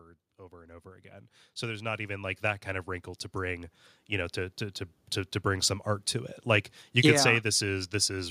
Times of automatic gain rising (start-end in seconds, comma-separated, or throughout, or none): 0.36-4.67